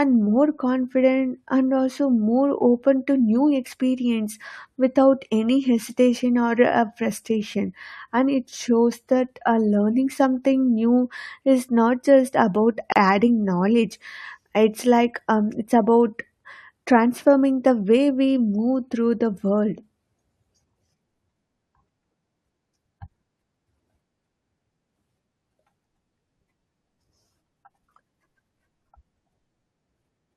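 A speech clip with a short hole at 12.92 to 12.96 s, right after "is not just about" and before "adding knowledge": a gap of about 37 ms with smeared edges, after which the speech resumes exactly where it stopped. This is a gap at a join of encoded pieces: separately encoded segments were spliced untrimmed, leaving encoder start delay and final-frame padding in place.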